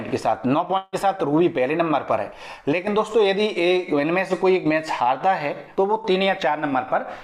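From 0.77 to 0.95 s the audio smears into a fading buzz. It returns with about 160 ms lost, likely from a long network dropout.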